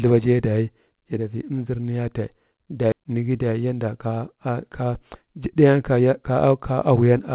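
A skip ahead occurs at 2.92 to 2.94 s. The speech jumps forward with no filler between the two sides of the cut. Roughly 0.4 s of audio was dropped so playback could catch up with material already queued. The result is an abrupt splice: part of the speech simply vanishes, and the surrounding sound is butted together almost directly.

Jitter buffer speed-up follows from 3.01 to 4.07 s. The buffer was holding more audio than its target, so the receiver repeatedly trimmed out short pitch-period-sized slices, around 100 ms in total, to pull the delay back down. Over that second the speech runs at about 107% of normal speed while keeping its pitch, giving a hurried delivery. Like everything in the clip, it passes through a G.711 mu-law call path that leaves nothing above 4 kHz.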